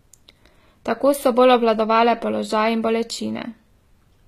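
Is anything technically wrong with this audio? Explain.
Yes. Throughout the speech, the treble sounds synthetic. This is likely HE-AAC compression at a low bitrate around 20 kbps: the upper band is rebuilt from copied lower bands, so s sounds turn gritty and lispy. A spectrogram shows repeated blocky high-frequency patterns and nothing above 14.9 kHz.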